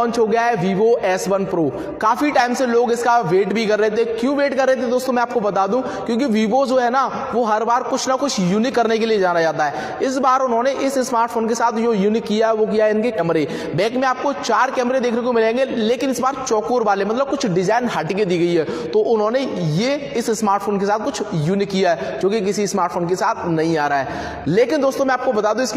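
Damaged data in the compressed stream at 13.15 to 13.20 s: corrupted bytes make the decoder misread frames and lose sync, producing a brief glitch lasting about 50 ms.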